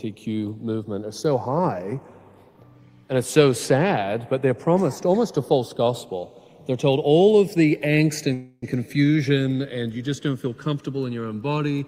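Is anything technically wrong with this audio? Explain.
Yes, two faults. Throughout, the channels are drifting apart: the two channels run on separate clocks, off by roughly 100 ppm, so their offset creeps toward a millisecond. Summed to mono, the comb notches sweep slowly, giving slow flanging.

From 8.33 to 8.64 s there is a call audio freeze, likely from delayed packets emptying the jitter buffer. About 290 ms is filled with a fading continuation of the last sound, then 20 ms of silence. Playback resumes without loss, but everything after runs 290 ms late.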